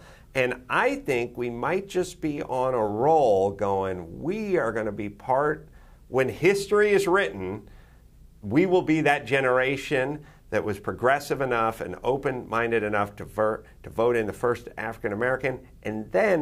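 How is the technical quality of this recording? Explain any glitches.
The recording has one fault, present from start to finish: the resampler restarted on every block. The conversion, which fits 44.1 kHz to 48 kHz, processed each 20 ms block in isolation, so at every block edge the filter lacked the real neighbouring samples and left a small error. Those errors recur 50 times a second, and with blocks this short they merge into a low buzz at 50 Hz. It rides along with the sound and disappears whenever the audio is silent.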